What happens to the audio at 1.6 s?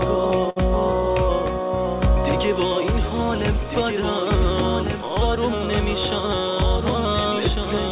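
At 1.6 s, a doubled audio track is in play. The signal was likely captured a second time by a slower path, so an undecayed, full-band copy, about 5 dB quieter, trails roughly a second and a half behind the original, starting abruptly and repeating earlier material over the current sound.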